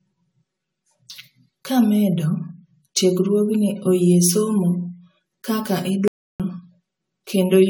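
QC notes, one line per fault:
throughout, channel delay (comb filtering): The speech sounds hollow and phasey, with a thin, boxy colour. One channel runs about 5 ms behind the other, and the two are summed to mono. Energy common to both cancels at evenly spaced frequencies. The first notch sits near 100 Hz, with further notches at regular steps above it. These fixed gaps in the spectrum stay put, so the dull, tube-like tone never changes.
throughout, generation loss: The speech has a swirly, smeared texture, hollower than a single AAC-LC pass at 96 kbit/s would leave. Consonant attacks blur. This likely comes from roughly ten rounds of decoding and re-encoding. Each pass quantises on a shifted frame grid, so noise and spectral holes build up. Content reaches up to 20 kHz, so the damage is in the detail, not the bandwidth.
6.08–6.40 s, audio dropout to silence: The speech cuts off mid-flow and the signal drops to silence for about 320 ms. 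No room tone or noise floor fills the gap. Then the sound resumes abruptly, as if switched back on. This points to a lost input while the recorder kept writing silence, likely from a device or link failure or a brief mute. Whatever was said in that span is gone.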